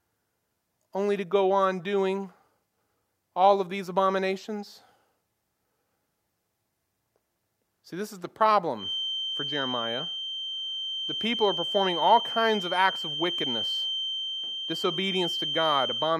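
Right after "this is the", at about 8.74 s, a feedback whistle sets in and carries on to the end of the speech. It's a thin, steady tone at 3.1 kHz, sitting just a few dB under the talking and swelling and fading slowly in level. The likely cause is the loudspeaker-to-microphone loop hovering right at the edge of feedback, so that one frequency keeps ringing without ever building up into a howl.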